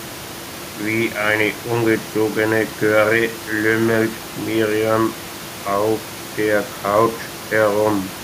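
Nothing stood out as a technical fault on listening to this speech, with only the room's own background noise sitting about 16 dB below the talker.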